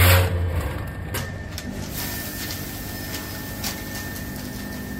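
From the start to about 1.18 s there is channel delay (comb filtering). One channel lags the other by a tiny fraction of a millisecond, pointing to an offset of only a few samples. When the two are summed, shared content cancels at regular intervals, with the first notch around 7 kHz. The top end sounds thin and hollow. Unlike a flanger, the notches stay put rather than sweeping. Unlike a plain treble cut, the loss is patterned.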